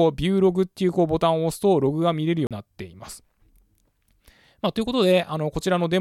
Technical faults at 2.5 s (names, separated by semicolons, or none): CD skip